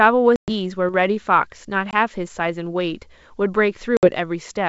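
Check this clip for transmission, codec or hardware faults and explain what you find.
Three brief dropouts interrupt the speech. At 0.36 to 0.51 s, 1.91 to 1.94 s and 3.97 to 4.09 s, hard-edged silences of 120, 20 and 60 ms cut in. The speech then returns slightly distorted before settling. This is packet loss on an ADPCM call, about ten, two and seven packets lost. Silence fills each gap, and the decoder's adaptive predictor and step size drift out of step with the sender's until they resynchronise. The surrounding wideband G.722 sound stays clear up to about 7 kHz.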